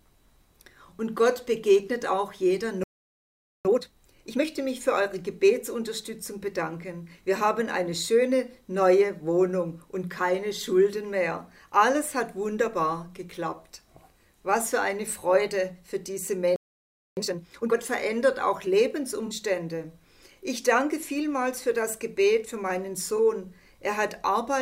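The audio halts twice in mid-flow, from 2.84 to 3.65 s (about 0.81 s) and from 16.56 to 17.17 s (about 0.61 s). Each is a playback stall, likely caused by the player running out of buffered data or its output thread being blocked. These are clean silences before the sound picks up again, rather than a glitch or dropout that merely damages the signal. Right after each gap comes a time-compressed catch-up, from 3.65 to 4.45 s and from 17.17 to 17.77 s. The sound runs at twice its normal rate while keeping its normal pitch, because the player is cutting out small slices and cross-fading the remainder to work off the backlog built up during the stall. This differs from a simple speed-up, which would raise the pitch, and from a skip, which would jump abruptly instead of hurrying. Separately, there are two brief corrupt frames concealed, at 19.26 to 19.32 s and at 23.16 to 23.20 s. Each lasts tens of milliseconds, consistent with a couple of damaged AAC frames that the decoder detected and masked. 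Unlike a stall, these do not pause the sound.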